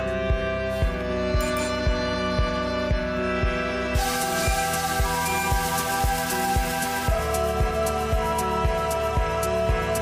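No technical faults can be heard in this clip.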